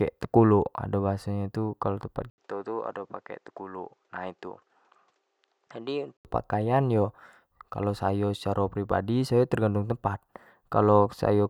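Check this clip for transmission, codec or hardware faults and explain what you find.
One fault here. From 2.3 to 6.25 s, just after "nyo tu kalua tempat", the speech drops out for 80 ms, then returns dull, about 10 dB quieter, nothing above 8.5 kHz, with faint new background noise. That's likely an input switched to a poorer device.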